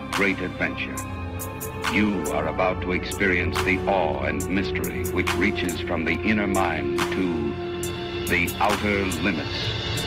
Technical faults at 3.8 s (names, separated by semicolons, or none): call bitrate drop